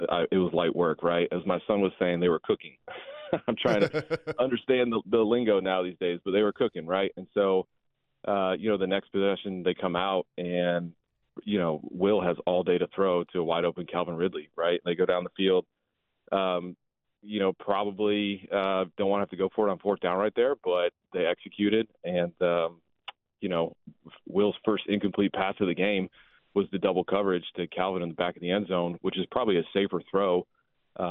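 Nothing goes wrong anywhere in this recording, so there's no fault to point to at any moment.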